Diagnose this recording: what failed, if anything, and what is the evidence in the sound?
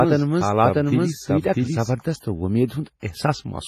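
The whole clip carries heavy transform-codec damage, most likely WMA compression. The speech has a ringing, washy quality, with a hiss that rises and falls along with the signal. Nothing is present above about 15.4 kHz, and the band-limiting plus the coarseness of the quantisation fits a low bitrate, around 24 kbps. At that rate the encoder's long blocks smear quantisation noise across tens of milliseconds and drop weaker spectral lines.

A doubled audio track runs from the very start of the clip until 1.94 s, where it stops abruptly. A second, full-band copy of the speech trails the original by roughly 0.7 s at about the same level, with no decay or room colouring, so it is not acoustic reflection. The likely cause is either a second capture through a slower path or an edit that left two misaligned copies mixed together.

Pre-echo appears from 3.00 to 3.03 s. A short burst of hiss, about 30 ms long, arrives before a sharp attack, and that attack sounds softened and smeared. 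This is a codec-stage artefact. The transform encoder spreads quantisation noise evenly over a block, so when a loud onset falls late in the block, noise sized for that onset also fills the quiet moment just before it.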